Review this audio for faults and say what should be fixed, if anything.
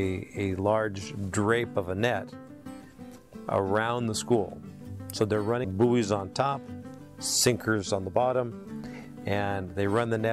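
Compressed frames skipped at 5.64 s: roughly 0.7 s of audio vanishes, fitting about ten missing or rejected 92.9 ms frames.

To prevent it, re-encode from the source or re-transfer the file, checking frame integrity so the decoder receives every frame undamaged.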